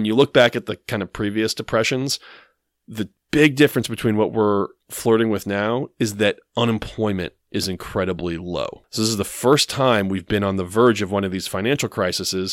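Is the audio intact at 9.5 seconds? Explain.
No. At 9.53 s, right after "this is the", the speech exceeded what a stage in the chain could pass, overdriving it by about 2 dB, so the peaks were cut flat. This hard clipping adds high harmonics, heard as a brief crackle.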